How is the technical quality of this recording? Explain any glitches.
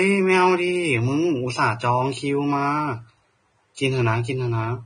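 Pretty rough, honestly. The speech carries heavy Vorbis compression artefacts for the whole clip. Nothing comes through above about 9.7 kHz, and the treble that's left sounds hissy and grainy. Vowels have a roughened edge, and consonant attacks smear. That's likely Vorbis at low quality, which fits a bitrate somewhere around 22 kbps. The encoder pulls the cut-off down and quantises the upper residue so coarsely that real detail turns into noise of similar energy sitting on the spectral floor.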